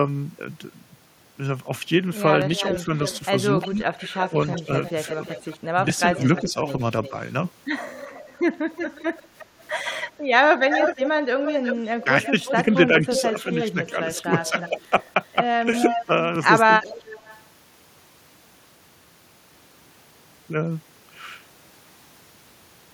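Echo leak from 2.56 to 7.1 s: a copy of the speech returns about 355 ms late and about 15 dB down, likely because a far-end loudspeaker echo slipped past an incomplete echo canceller. Speech suppressed in double talk overlaps it, from 2.71 to 4.95 s, with the voice dipping up to about 10 dB for roughly half a second in total, and again from 6.12 to 7.13 s, with dips of about 5 dB over roughly a third of a second. Both sides talk at once here, and the canceller, likely unable to tell the talker from the returning echo, turns both down.

The echo leak returns from 8.02 to 14.7 s at a 361 ms delay, now only about 5 dB below the speech and so far more prominent. Within it, from 12.03 to 14.8 s, double-talk suppression again pulls the voice down by about 5 dB in brief scraps.

A final echo leak runs from 15.74 to 17.43 s, trailing by 366 ms at about 5 dB below the speech.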